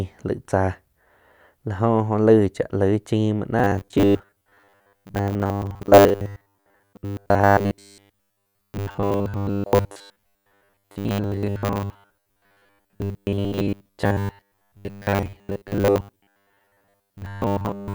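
Speech clip with robotic sound from repeated short buffers from 3.59 s to the end at 17.94 s. The voice becomes a rigid metallic buzz fixed at 100 Hz, which fits a 10 ms buffer being looped. Most of the audio is likely skipped, with repeats filling the gaps.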